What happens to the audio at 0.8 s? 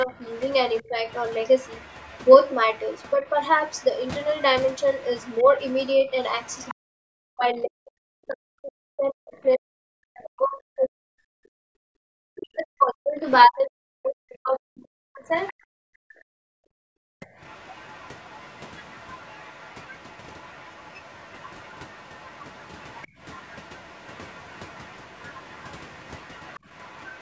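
At 0.8 s the talker's level dips in short pieces. The drop reaches roughly 10 dB and adds up to about a fifth of a second between 0.04 and 0.97 s. This is likely speech suppressed in double talk. The echo canceller turned down the talker along with the overlapping far-end sound.

Underneath, a second voice is faintly audible, far below the talker's level. This is likely the other side's voice leaking through. It runs from 0.18 to 6.75 s. The loudspeaker playback reached the microphone, and echo cancellation left a residue behind.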